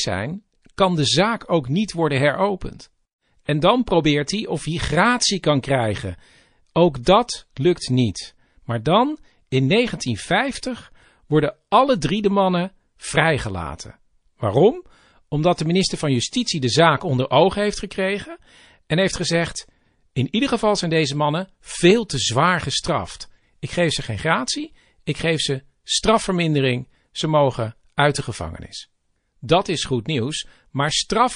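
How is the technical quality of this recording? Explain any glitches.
The recording has plainly audible coding damage throughout, plus three brief pre-echo glitches.

MP3 compression: The encoder was likely starved of bits, consistent with a low MP3 bitrate around 40 kbps. It discards treble above a fixed cutoff and drops weak frequency lines that flicker between frames, so the speech sounds dull, watery and swirly, with metallic chirps on s sounds.

Pre-echo: At 3.45, 7.03 and 15.56 s, the encoder spread quantisation noise across long transform blocks, about 52 ms, without switching to short blocks. Hiss therefore leaks ahead of each attack, lasting 36, 35 and 24 ms and rising about 22, 22 and 13 dB, which softens the onsets.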